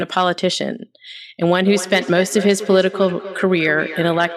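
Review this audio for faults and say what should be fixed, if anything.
From 1.41 s to the end, the speech returns as thin, ringing repeats about a fifth of a second apart, peaking about 12 dB below the speech. This is feedback echo between two devices: one device's microphone recaptures the other's playback, which its echo canceller cannot remove. Muting one device's microphone and speaker, or using headphones, prevents it.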